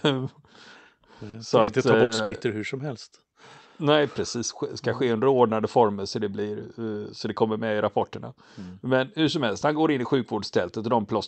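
From 1.29 to 2.33 s the speech turns choppy and robotic, with parts of the sound dropping out. This is repeated packet loss (robotic sound): five gaps fall within about a second, the longest 80 ms, and together they remove 260 ms, roughly a quarter of that stretch. Each hole is papered over by stretching the preceding sound. The top end stops near 8 kHz, consistent with an Opus call path running around 64 kbps.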